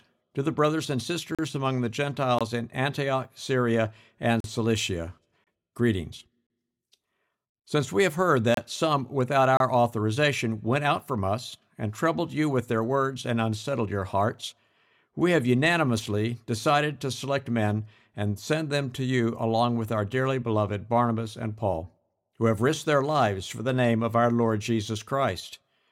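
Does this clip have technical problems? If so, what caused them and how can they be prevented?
Yes. Gap between stream segments: the time stamps of consecutive one-second segments don't quite meet, and the player fills each shortfall with silence. In this speech that produces hard-edged dropouts of 22 to 47 ms at 1.35, 2.39, 4.40, 5.44, 6.47, 7.50, 8.54 and 9.57 s, about once per second. Nothing is lost; the sound briefly stops and resumes. Keeping segment time stamps contiguous when packaging, so each segment begins exactly where the previous one ends, prevents it.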